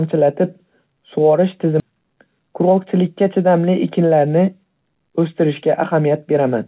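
Skip ahead at 1.8 s: the sound jumps forward with no gap, and roughly a second of speech is missing. The join between the two sides is almost seamless, so the cut is heard as an abrupt change in the flow of speech rather than as silence. The receiver likely discarded that stretch because later audio was already queued, dropping it in transit or as the jitter buffer overflowed. That abrupt jump cut the playback delay by about a second.

Jitter buffer speed-up from 1.90 to 2.86 s: immediately after the jump, the speech runs at about 109% of normal speed while keeping its pitch, so it sounds rushed for just under a second. The buffer was holding more audio than its target, so it repeatedly removed short slices of one or a few pitch periods, together about a tenth of a second, to catch up. Through the narrowband call path, with nothing above 4 kHz as expected for G.711 A-law, the hurried pacing is still clearly audible.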